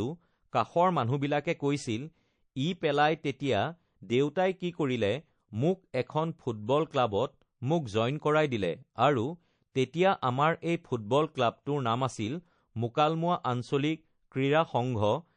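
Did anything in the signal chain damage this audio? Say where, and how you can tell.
Yes. Codec stage: throughout the speech the texture is watery and swirly, plainly audible damage likely from MP3 compression at a low bitrate, around 40 kbps.

Codec stage again: pre-echo at 0.50, 9.72 and 11.63 s, a hiss about 13 to 17 dB up spreading roughly 30 ms before attacks, because the 52 ms blocks never switch short.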